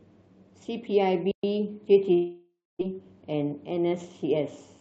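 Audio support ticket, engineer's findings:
Playback stall, 1.31–1.44 s. Output goes silent for about 120 ms mid-flow. Likely cause: player buffer underrun or blocked audio thread on the receiving end, starving the output device until data flowed again.

Long network dropout, 2.13–2.83 s. Last sound extended as a decaying buzz or hiss, then about 230 ms of near-silence; roughly 0.4 s of content never played. Receiver concealment filled the gap from the prior frame. Likely cause: packet loss burst with delay shift around 0.3 s.

Jitter buffer speed-up, 2.91–4.36 s. Audio runs about 7% fast at unchanged pitch; delivery sounds hurried. Jitter buffer was over target, so short pitch-period segments were repeatedly cut, about a tenth of a second in total. Opus call path, top end cut at 12 kHz.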